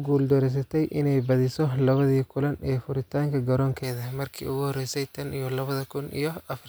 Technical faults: pre-emphasis left on

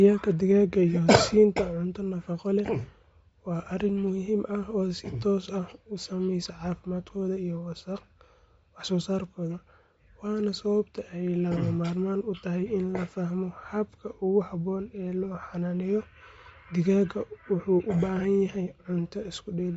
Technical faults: Bluetooth LC3 compression

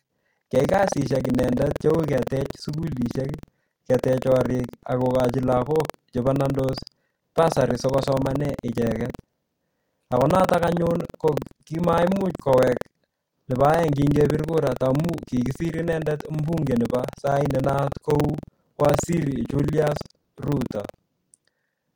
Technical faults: buffer tearing; corrupt frame decoded

